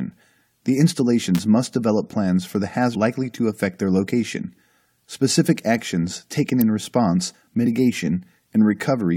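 An electrical switching spike at 1.35 to 1.39 s, just before "must develop plans for", is a sharp snap laid over the speech, likely a nearby switch or discharge arcing into the line. Damaged data in a compressed stream at 2.94 s produces a brief glitch as the decoder misreads corrupted frames and resyncs. Another electrical switching spike at 6.61 s, between "actions taken" and "in response", is a sharp snap, likely from the same kind of arcing. Damaged compressed data recurs at 7.65 s, right after "actions taken in response", as another short blip where the decoder loses frame sync.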